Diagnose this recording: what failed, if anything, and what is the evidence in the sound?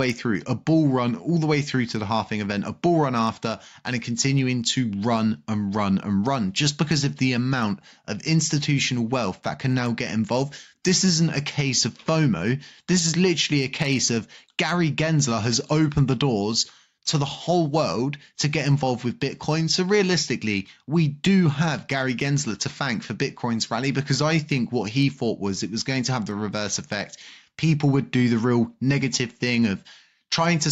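Gain pumping throughout: the gain ducks about 5 dB under loud sounds, likely an overdriven call-processing limiter.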